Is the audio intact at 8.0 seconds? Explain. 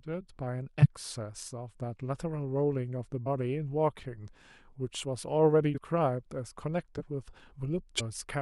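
No, there's a compressed frames skip from 7.97 to 8.01 s: missing or rejected frames drop roughly a tenth of a second of speech, so the audio jumps ahead.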